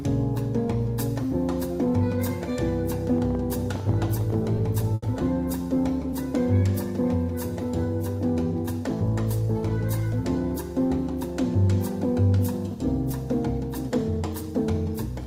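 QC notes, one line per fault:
3.18–4.35 s, train of clicks: about 15 irregular clicks, near 10 per second, peak about 5 dB above the sound. Likely interference or a faulty connection or power supply.
4.94–5.05 s, short stall from a late packet: the last sound is held for 80 ms while the buffer sits empty. Nothing is lost, but playback now runs 80 ms later.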